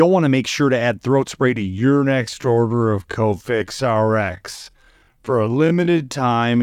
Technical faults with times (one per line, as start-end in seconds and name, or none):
1.58-6.62 time-stretched section